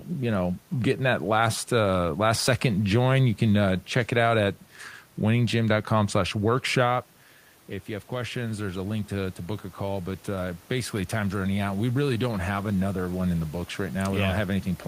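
From 7.86 s to 13.26 s, the speech and the room noise behind it swell together slowly over about five seconds, ending just before "in the books". This is automatic gain rising. The talker moved away from the microphone at around 7 s, and the input fell by about 9 dB. The gain control judged the signal too quiet and raised its gain by about 6 dB, lifting the background along with the voice.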